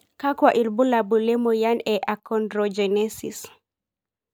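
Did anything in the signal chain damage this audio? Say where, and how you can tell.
No, nothing in this speech recording points to damage at any stage of the chain. No event in the audio marks a point where the signal was harmed.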